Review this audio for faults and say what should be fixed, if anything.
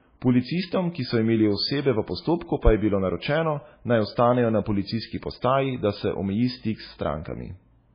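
The speech sounds dull and watery from start to finish. Nothing is heard above 5 kHz. Weak detail flickers on and off between frames, giving a swirly texture. This is likely MP3 compression, heavy enough to fit a bitrate near 16 kbps. Encode at a much higher bitrate, or work from an uncompressed source.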